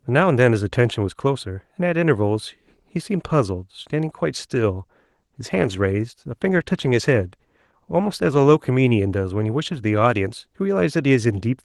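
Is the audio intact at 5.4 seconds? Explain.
No. At 5.4 s the speech sits inside a call bitrate drop (5.05 to 8.79 s), where the encoder was starved of bits, likely around 18 kbps instead of 32, so the voice turns coarse, watery and muffled.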